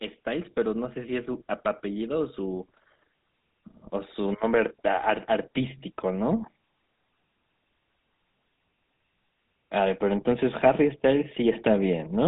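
The speech has been through the GSM full-rate codec for its whole length, at a bitrate that fits 13 kbps. The codec models the vocal tract and drives it with sparse, regularly spaced pulses. This gives a plainly audible buzzy, gravelly roughness, with nothing above about 3.8 kHz.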